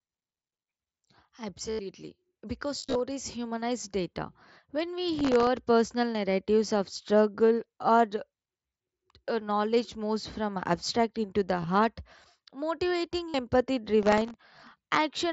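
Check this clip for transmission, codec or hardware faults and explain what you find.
There are two faults on this speech clip: concealed Bluetooth headset packet loss in four places and processor overload crackle in two. The link itself sounds like the mSBC wideband headset codec (something like 61 kbps), with speech topping out around 8 kHz and only light graininess.

Concealed Bluetooth headset packet loss happens at 1.71 to 1.79 s, at 2.79 to 3.00 s just before "humanize data", at 11.61 to 11.67 s right after "from abstract into the", and at 13.29 to 13.34 s. When headset packets dropped, the phone filled the holes by repeating the best-matching recent stretch of waveform. That gives a brief buzzy, held tone. The first and last gaps are solid runs of about 82 ms and 53 ms. The middle two are scattered short losses rather than one solid run.

Processor overload crackle hits at 5.19 to 5.66 s, just before "narratives of struggle or", and again at 14.03 to 14.78 s. 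The processor couldn't keep up with very small buffers, well under a millisecond each, and missed a run of deadlines, roughly twenty in the first burst and forty in the second. Each miss replayed a scrap of old audio with hard edges. You hear that as gritty tearing riding over the speech until the load eases.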